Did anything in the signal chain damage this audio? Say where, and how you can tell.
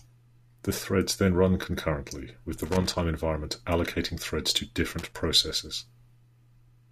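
Yes, loose connector crackle in the analogue wiring: irregular scratchy bursts from 2.57 to 3.00 s, after "then run concurrently with", and from 4.99 to 5.14 s, after "environment allocating threads to". A moving contact chops the signal on and off, unlike steady, periodic digital dropouts.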